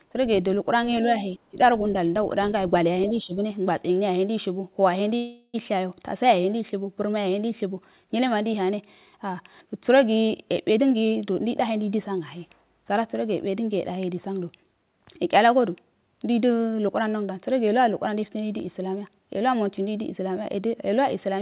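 Speech carried over a narrowband call path with nothing above 4 kHz, which fits G.711 mu-law at 64 kbps, shows three kinds of fault. Speech suppressed in double talk appears twice: the level dips by about 25 dB from 1.48 to 1.59 s and by about 10 dB from 3.23 to 3.37 s. This is likely an echo canceller ducking the talker while the far side spoke. A call audio freeze runs from 5.16 to 5.56 s. For 377 ms the last sound is stretched into a fading buzz with no silence, and then the speech resumes intact, now 377 ms later than before. The likely cause is delayed packets draining the jitter buffer. A jitter buffer speed-up from 10.73 to 11.56 s plays the audio at 131% speed at unchanged pitch, trimming roughly 0.3 s of pitch-period slices, so the passage sounds hurried.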